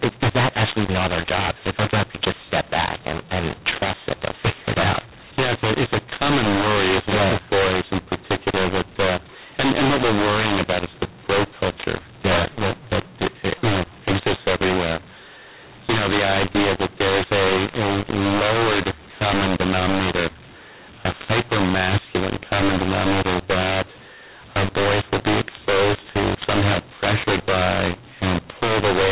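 From start to finish the speech sounds harsh and gritty, with loud and soft passages scrambled in level and the pauses filled with hiss. It is a mu-law and A-law mix-up: telephone audio written as A-law is being read back as mu-law throughout.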